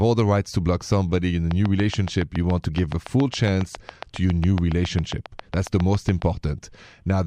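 Something in the chain, likely electrical interference from nearby equipment or a faulty connection or power supply, was injecting a regular pulse into this speech recording, producing a train of clicks. Starting just after "block somebody in a" at 1.51 s and running until 6.23 s, about 40 near-identical clicks tick along at a steady 7.2 per second, peaking around 10 dB above the speech itself, so they stand out sharply over the talking and through the pauses alike.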